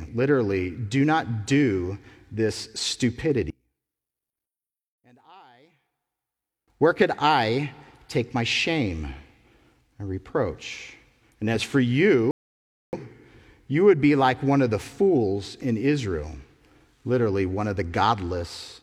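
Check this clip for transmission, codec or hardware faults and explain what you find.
Two faults are audible in this speech recording.

From 3.50 to 6.68 s the speech nearly disappears, dropping by about 33 dB and leaving only a faint residue until it returns just before "where could I take". That collapse points to one channel inverted. With one stereo channel likely flipped in polarity, everything the two channels share cancels when they are summed to mono, so the centred speech almost vanishes and only the small difference between channels remains.

At 12.31 s, right after "as for", the sound cuts to silence and picks up at 12.93 s exactly where it left off. This is a rebuffering stall: the player exhausted its downloaded audio and paused until more arrived. Nothing is skipped or repeated, but the gap adds 0.62 s to the playback.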